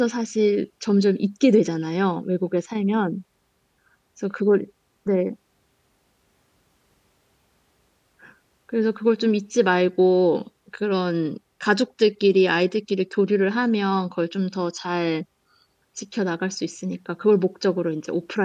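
No technical fault can be heard anywhere in the recording, and the speech signal stays continuous and intact throughout.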